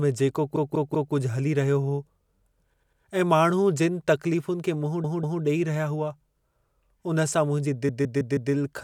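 The speech stutters four times, a short slice replaying back to back: at 0.56 to 1.14 s a 192 ms block sounds three extra times, at 2.74 to 3.02 s a 96 ms block three extra times, at 5.04 to 5.42 s a 192 ms block twice more, and at 7.89 to 8.53 s a 160 ms block four extra times. These are repeated frames: the same compressed frames reached the decoder again, so each repeat lengthens the audio by its block.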